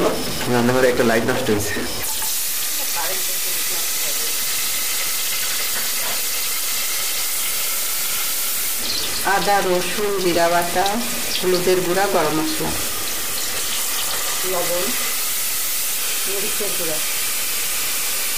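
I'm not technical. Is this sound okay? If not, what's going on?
No. Somewhere in the recording chain, one of the digital bits that make up each sample is stuck at a fixed value instead of switching, most likely from a broken connection or a faulty converter. This is called a stuck bit. About half the samples come out wrong by a set amount, so the whole clip has a harsh, buzzy distortion, and quiet gaps fill with fairly loud noise because that stuck bit sits high up.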